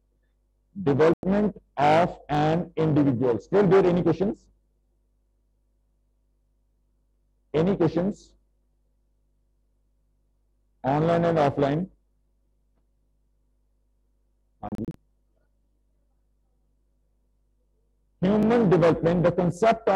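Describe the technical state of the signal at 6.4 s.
Overlapping chunks at 6.37 to 6.39 s: a 4.0 s chunk starts 20 ms early, so that slice plays twice at the join, heard as a brief click-like stutter.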